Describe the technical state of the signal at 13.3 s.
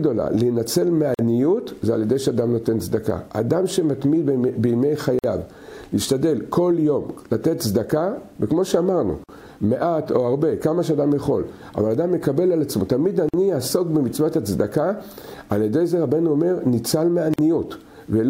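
A gap of about 49 ms opens from 13.29 to 13.34 s, with smeared edges, and the sound resumes where it stopped. This is a gap at a join of encoded pieces: separately encoded segments, about 4 s long, were joined untrimmed, keeping each run's start delay and last-frame padding.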